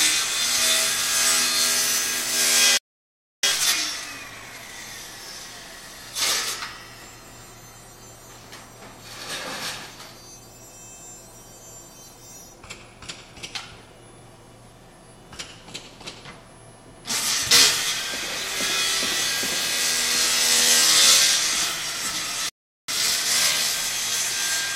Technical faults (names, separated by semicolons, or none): playback stall; time-compressed catch-up